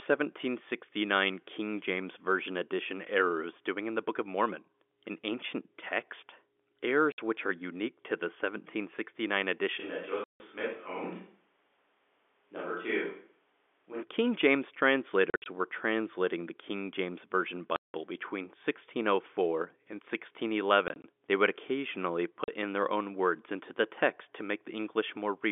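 Packet loss filled with silence cuts a hard-edged gap at 7.12 s, 60 ms long. From 9.81 to 14.01 s the sound becomes hollow and roomy, a few dB quieter over a faint background noise, with abrupt changes at both ends. This is likely a switch to a distant microphone. Further silent dropouts fall at 10.24, 15.3, 17.76, 20.88 and 22.44 s, lasting 40 to 180 ms, in steps that fit 20 ms packets.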